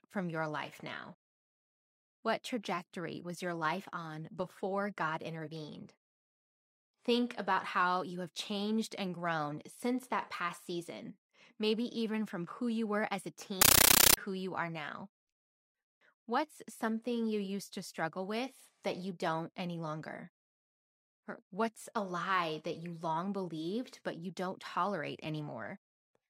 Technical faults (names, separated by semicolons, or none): compressed stream played as audio